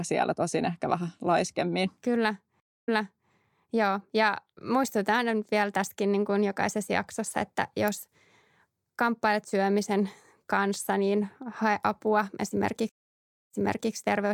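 Stream reconnects occur at 2.60 to 3.31 s and 12.89 to 13.93 s. Each time the connection dropped and the player fell silent, for 260 ms and then 622 ms. A fresh decoder then started mid-stream, fading in from a resent burst, so the speech resumes 0.44 s and 0.42 s earlier, repeating what was just heard.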